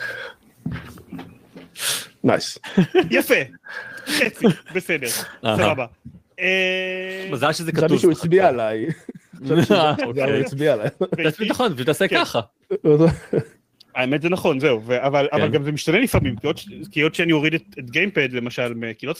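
No dropouts, distortion, glitches or level problems turn up anywhere in the recording.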